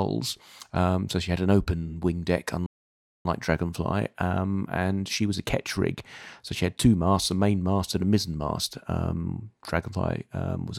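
At 2.66 s, just after "an open wing deck", the speech halts in mid-flow and leaves about 590 ms of silence until 3.25 s. This is a playback stall, likely caused by the player running short of data or its thread being blocked. Unlike a brief dropout, the silence is long and complete.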